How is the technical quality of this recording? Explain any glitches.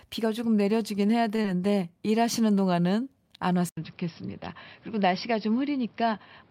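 The recording has three glitches: two brief network dropouts close together near the start, and a lasting change in the sound's character from just before the four-second mark to the end.

At 1.35 to 1.40 s there is a short stall from a late packet. A packet arrived late and the jitter buffer ran dry. The receiver held the last bit of speech for about 27 ms until the data came in, then carried on from the same point, with everything after running about 27 ms later. It sounds like a syllable drawn out slightly too long, with a slight buzz or dip. What separates it from packet loss is that nothing is skipped. The speech is only stretched.

From 1.42 to 1.46 s comes a short concealed packet loss. About 20 ms of the stream never reached the decoder. The receiver filled the gap with roughly 18 ms of synthesized continuation, modelled on the preceding sound, then blended back into the real signal. 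The result is a brief smear or wobble. Unlike the stall just before it, material really is gone here, so a short sound can drop out rather than merely lengthen.

From 3.69 s to the end, the input was likely switched to a poorer device. There is about 80 ms of silence at the switch point. After it, nothing is present above 5.6 kHz, so the speech turns dull and boxy. A new background noise also appears, roughly 30 dB below the speech, while the loudness stays about the same. A network fault would be brief and leave the tone unchanged. Here the narrower band and the different noise floor last through the rest of the recording.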